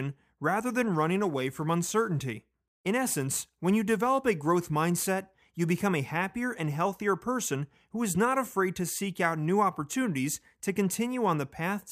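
From 0.91 to 5.09 s, sample clock jitter mistimes samples by a few microseconds. The speech gains a hiss that roughens louder, brighter sounds.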